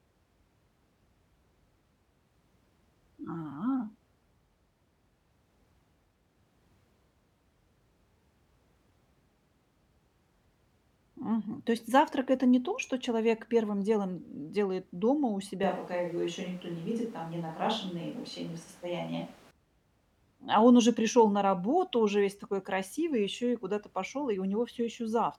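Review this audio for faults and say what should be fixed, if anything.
Switch to a distant microphone from 15.63 to 19.51 s, right after "м делает дома у": the sound abruptly turns roomy and hollow, with thinner bass and room noise about 25 dB below the speech, at roughly unchanged level. Likely the close microphone dropped out, leaving a farther one capturing more reflections. Secure the close mic's cable and run a backup recorder on it.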